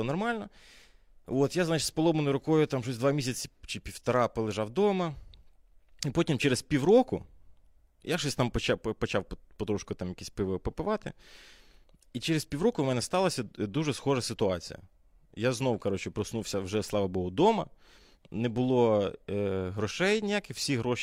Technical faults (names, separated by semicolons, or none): none